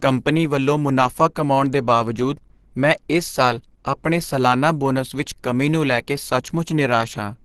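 From start to finish the speech has a hard ceiling, with nothing above about 12.1 kHz, and it sounds muffled, a bit hoarse and grainy in a way you can plainly hear. That's likely Opus compression working in its hybrid speech mode, where the low band gets a speech-oriented coder and the top is only roughly sketched in. The restricted super-wideband range and the roughness fit a low bitrate, something around 16 kbps.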